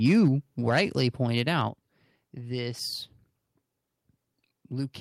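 From 0.05 to 0.28 s the speech peaks are flattened and carry a harsh crackle, sounding like microphone overload, likely from input gain set about 2 dB above the converter's limit, with a few percent of samples clipped. At 0.28 s the voice and background drop together by about 3 dB, a single microphone volume step-down, as if the gain control likely reacted to that clipping. From 0.68 to 0.81 s the overload crackle returns on fewer peaks, each likely driven about 6 dB past the converter's limit. At 1.68 s a second step-down cuts the level by about 6 dB in one jump.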